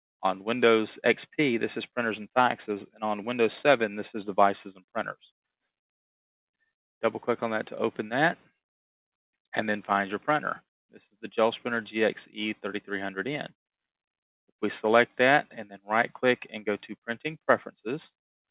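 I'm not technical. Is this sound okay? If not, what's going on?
Yes, it sounds fine; nothing here needs fixing.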